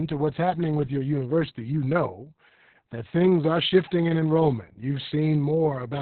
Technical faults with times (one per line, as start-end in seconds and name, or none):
0.00-6.01 Opus voice compression